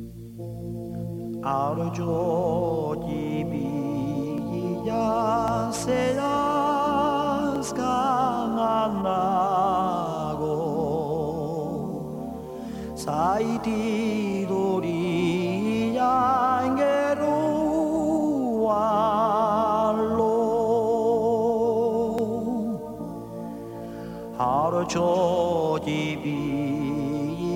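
Single sharp clicks occur at 4.38, 5.48, 7.56 and 22.19 s. Each is most likely dropped samples: under a millisecond of the stream goes missing, so the waveform steps abruptly from one value to a later one instead of continuing smoothly. Too little is lost to remove any audible sound. Only the discontinuity is heard, as a brief tick. On a spectrogram each appears as a thin vertical line across all frequencies, and on the waveform as a sudden jump.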